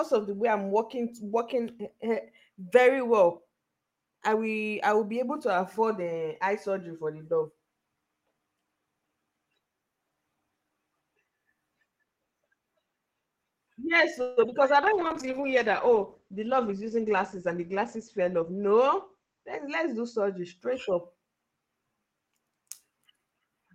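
Speech, with a cluster of network faults from 14.2 s onward. From 14.21 to 14.39 s there is a call audio freeze. For 156 ms the last sound is stretched into a fading buzz or hiss and then resumes where it stopped, with nothing lost. That is most likely packets held up until the jitter buffer ran dry. It differs from packet loss because the speech simply pauses and picks up intact. Right after, at 14.47 to 14.50 s and 14.50 to 14.54 s, comes short concealed packet loss. About 40 ms and then 20 ms of real audio never arrived and were patched with continued sound, heard as a quick smear or wobble where material is actually missing rather than delayed. From 14.60 to 15.14 s a jitter buffer slow-down repeats pitch periods to rebuild reserve, adding 36 ms. Playback runs at 94% speed with unchanged pitch and drawn-out sounds, unlike a tape slowing down, which would drop the pitch. Overlapping this, a call bitrate drop from 14.83 to 20.66 s takes the encoder from 40 to 12 kbps and the audio bandwidth from 20 kHz down to 8 kHz. 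At its lowest for about 5 s, the voice turns muffled and watery, a tonal change rather than a timing one. Finally, from 16.29 to 18.43 s, a jitter buffer speed-up trims short pitch-period pieces, removing roughly 150 ms. The speech sounds hurried at 107% speed while its pitch stays put.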